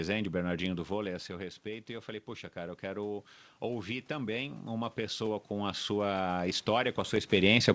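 Automatic gain rising runs from 0.89 s to the end of the clip. After the talker moves away around 0.5 s, the level reaching the microphone drops by about 11 dB, so the gain control slowly pushes its gain back up, and the speech and room noise swell together.

Dropped samples appear at 7.16 s as a single sharp click. The waveform jumps abruptly from one value to a later one. The likely cause is a gap in the stream of a fraction of a millisecond, far too brief to remove any audible sound.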